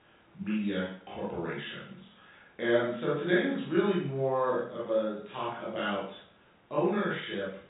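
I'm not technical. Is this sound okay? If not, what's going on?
Yes, nothing here is wrong.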